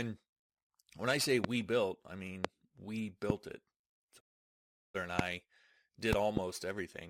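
Loud pops at 1.44, 2.45 and 3.30 s, then 5.19 s and a double pop between 6.13 and 6.39 s, jump roughly 20 to 25 dB above the speech, which continues underneath; the likely cause is a voltage spike from a switch, static or driver glitch. A digital broadcast dropout from 4.19 to 4.96 s fades the speech out over 20 ms and leaves 736 ms of silence, which fits about two dozen frames lost or rejected by the receiver.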